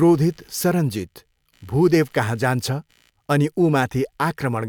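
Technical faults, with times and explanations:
Throughout, computer activity noise: a faint buzzy chirping runs under the speech, pulsing at around 70 times a second and sitting roughly 40 dB below it. Shifting load from the processor, graphics card or mouse disturbs the ground that the audio circuit shares, so the noise follows the machine's workload, not the speech. Unlike steady mains hum, it has no fixed 50 or 60 Hz tone and wavers as the computer's activity changes.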